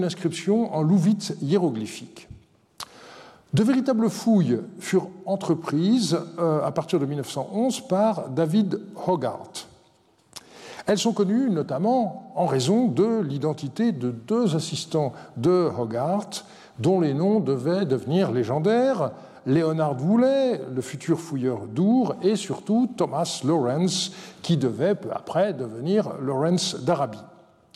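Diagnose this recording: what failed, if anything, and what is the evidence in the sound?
A bit error spike in the digital data path: a single sharp, broadband tick at 16.02 s, about -39 dBFS, from a flipped bit corrupting three consecutive samples.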